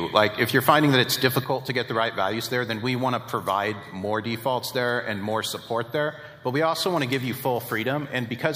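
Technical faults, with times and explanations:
1.44 s to the end, one channel drops out: the sound abruptly falls by about 6 dB and stays there, likely because one stereo channel vanished before the mono sum.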